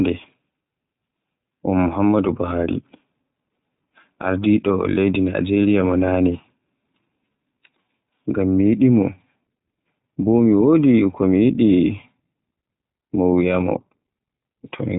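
Speech runs throughout through the iLBC codec: nothing above about 3.8 kHz survives, and a plainly audible synthetic roughness, restarting every frame rather than smearing, fits 20 ms frames at 15.2 kbps.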